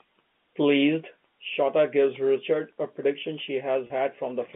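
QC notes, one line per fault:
3.87–3.90 s, packet loss with pitch repetition: a brief held, buzzy tone as the receiver repeats the last pitch period to cover a 30 ms gap.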